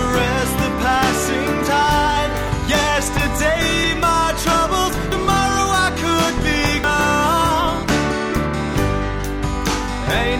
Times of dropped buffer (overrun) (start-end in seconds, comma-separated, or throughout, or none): 2.48, 3.84, 5.12, 6.84